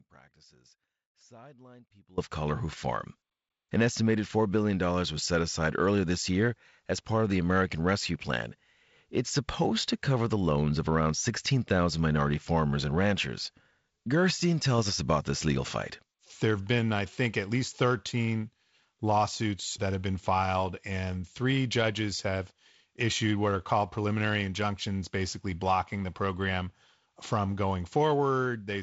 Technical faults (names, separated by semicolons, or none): audio dropout to a faint residue